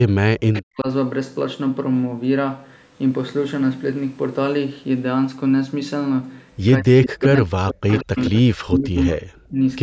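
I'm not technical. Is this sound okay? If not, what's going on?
No. The voice keeps ducking out, and quieter repeats of it come back.

Speech suppressed in double talk: when both sides likely talked at once, the call's echo canceller couldn't tell this voice from the loudspeaker echo and turned everything down. The voice sinks nearly to silence from 0.0 to 0.87 s, 6.8 to 7.87 s, 8.03 to 8.32 s, and 8.58 to 9.59 s.

Echo leak: at the other end, sound from a loudspeaker likely reached the microphone and wasn't fully removed, so it was sent back. A quieter copy of the voice, about 160 ms late, appears at 0.54 to 0.61 s, 7.03 to 7.25 s, 7.88 to 8.41 s, and 9.0 to 9.04 s.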